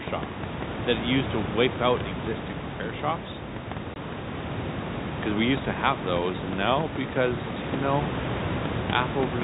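At 3.94 to 3.96 s the speech breaks for 20 ms, a case of packet loss filled with silence. The receiver played nothing in place of the missing data, so the edges are hard, and the room noise, only about 8 dB below the speech, vanishes with it. That total silence sets it apart from concealment, which would smear or repeat the sound. The gap's length fits a single lost 20 ms packet.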